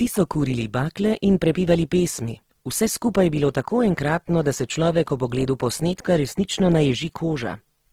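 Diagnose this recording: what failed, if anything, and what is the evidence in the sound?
The codec stage is where it went wrong: Opus compression runs through the whole speech clip, and the damage is plainly audible. The top stays open up to about 20.2 kHz, yet voiced sounds come out grainy and rough, as band energy is likely refilled with noise at something like 16 kbps.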